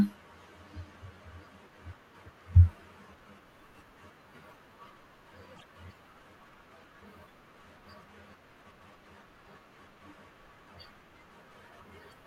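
Around 5.55 s the speech hits a patch of repeated frames. One compressed block, about 26 ms long, gets played twice more, so there's a quick little triple stutter running to about 5.65 s. It also stretches the clip by about 52 ms.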